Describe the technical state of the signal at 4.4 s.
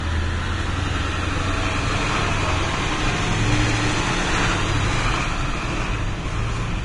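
At 4.4 s the audio carries heavy Vorbis compression damage, as it does from start to end. Nothing reaches above about 10.5 kHz, and the remaining treble sounds hissy and grainy, with roughened tones and softened attacks. The likely cause is an encoder at a very low quality setting, which fits a bitrate around 32 kbps. It keeps a smooth spectral envelope but quantises the fine high-frequency detail so coarsely that it turns into noise of similar energy. A plain low-pass filter would leave the band below the cut-off clean, not noisy.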